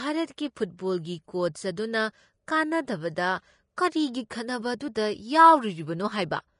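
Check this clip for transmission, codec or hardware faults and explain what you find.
One codec fault runs through the whole clip. Throughout, the speech is hissy and grainy with nothing above 10.6 kHz, likely Vorbis compression coarsely quantising the treble, which fits a bitrate near 34 kbps.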